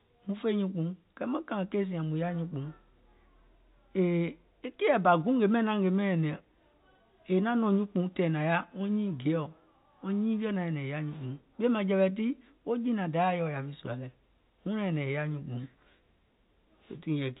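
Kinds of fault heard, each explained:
No faults are audible in this telephone-band speech.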